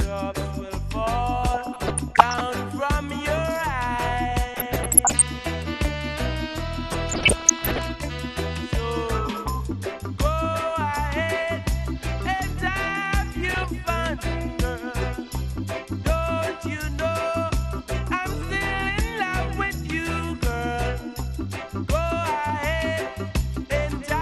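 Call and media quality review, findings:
MP2 compression, throughout. Dull, band-limited top end, gurgling granular texture. Likely an MP2 encoder starved of bits, consistent with around 80 kbps. Upper sub-bands drop out and flicker, and the remaining bands are coarsely quantised. Damage plainly audible.

DAB burbling at 1.52–2.43 s, 4.54–5.22 s, 6.92–7.90 s and 13.32–13.64 s. Short noise blips in single sub-bands over the programme. Bit errors slipping past error correction into the MP2 stream, at roughly 0.3–0.7%. Corrupted scale factors, where they get through, make sub-bands jump for up to a frame.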